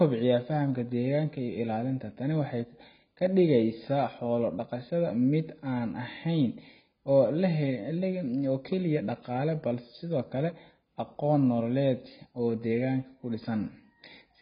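From start to finish the speech sounds dull and smeared, with nothing above 5 kHz and a watery, warbling fizz on sibilants and held vowels, a sign of heavy damage that is likely AAC compression at a very low bitrate, around 16 kbps. The encoder drops the top band and leaves gaps or substitute noise in what remains. A plain low-pass filter would dull the sound just as much but leave the lower frequencies clean, with no shifting warble.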